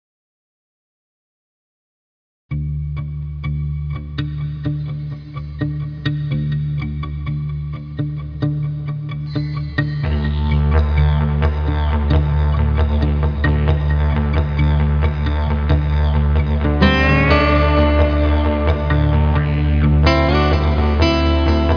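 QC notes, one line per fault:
Nothing stood out on listening to the audio.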